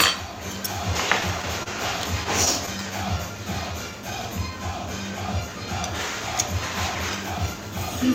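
A recording of everyday sounds shows three jitter-buffer faults. At 1.63 s a packet arrived late and the jitter buffer ran empty. The receiver held the last sound for about 29 ms until the packet turned up, then resumed at the same point. That is a short stall from a late packet: nothing is lost, but one moment of the sound hangs on slightly too long with a slight buzz or dip, and the overall delay grows by those 29 ms. From 2.78 s to 4.73 s the buffer was short of reserve, so the receiver padded it by repeating single pitch periods and fragments of quieter passages over and over. This jitter buffer slow-down adds about 110 ms across nearly two seconds and plays the sound at 95% speed without lowering its pitch. The events seem slightly drawn out and loosened. From 6.88 s to 7.55 s the opposite happened: the buffer held more audio than its target, so the receiver trimmed short pieces of one or a few pitch periods in quick succession. 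This jitter buffer speed-up runs the sound at 112% for about two-thirds of a second, removing roughly a tenth of a second in total, and the sounds come across as hurried and compressed in time at an unchanged pitch.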